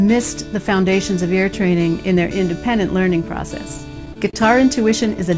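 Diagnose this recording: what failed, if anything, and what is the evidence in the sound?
Network stage: repeated packet loss (robotic sound) from 3.78 to 4.36 s. Four brief holes, the longest 28 ms, are bridged by extending the preceding sound, giving a choppy texture. A spectrogram shows short smeared, stretched patches below the G.722 path's 8 kHz ceiling.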